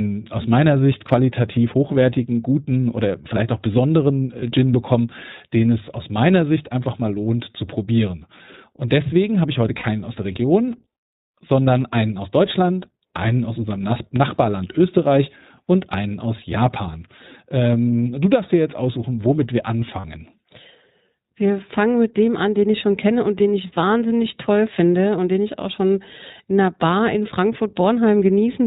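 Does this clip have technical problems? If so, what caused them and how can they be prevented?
Yes. The speech was carried over the iLBC codec, which fits its 15.2 kbps mode with 20 ms frames. Everything above 4 kHz is removed, so the speech sounds dull and band-limited, and coding each frame's excitation separately adds a plainly audible rough, synthetic edge. Prevent this with a wideband codec such as Opus when both ends support it.

Lost iLBC frames then made the decoder fill the gaps by repeating the last pitch cycle mixed with noise. This happens at 4.40–4.43 s after "oder vielleicht auch besonderen", for about 20 ms. It happens again at 9.78–9.86 s, between "deswegen habe ich heute" and "aus der", for about 60 ms, and at 20.00–20.05 s after "jetzt aussuchen womit wir", for about 40 ms. Each gap sounds like a short, buzzy held vowel, and the voice returns to normal almost at once afterwards. 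Prevent this with a more reliable network path, forward error correction or packet redundancy, and a suitably sized jitter buffer.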